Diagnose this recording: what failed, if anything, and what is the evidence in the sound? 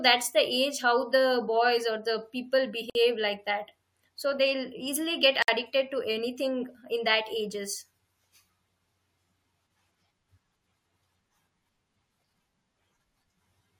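The codec stage is at fault here: there's a gap at a join of encoded pieces twice, a 53 ms gap at 2.90 s after "boys or the people" and 58 ms at 5.42 s before "to anything in that". Separately encoded chunks were butted together with their encoder delay and end padding left in, so the speech drops out and then resumes where it stopped.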